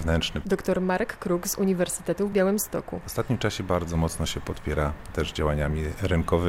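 At 2.32 s a hard-edged dropout of about 3.5 ms briefly cuts the sound: a gap between stream segments, where mismatched timestamps leave a hole the player fills with silence.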